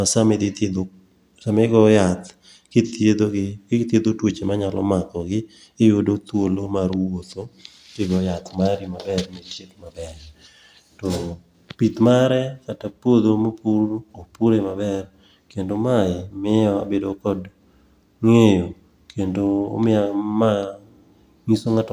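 No technical faults can be heard in this speech recording.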